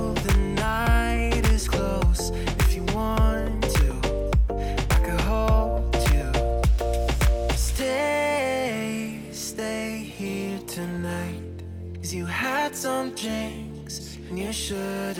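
No technical faults can be heard anywhere in the recording. Nothing interrupts or disturbs the sound at any point.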